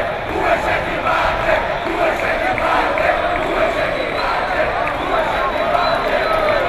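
No technical faults can be heard anywhere in the audio.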